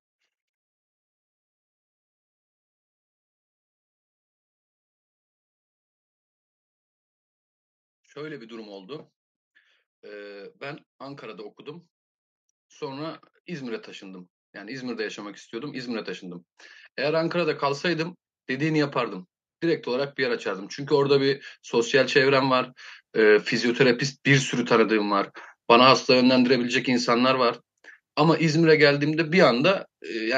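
From 12.79 s to 23.91 s the automatic gain rising fault appears: the level control judged the input too quiet and slowly pushed its gain up by about 17 dB, so speech and background noise swell together. The waveform envelope widens steadily, and the spectrogram brightens across all frequencies at once.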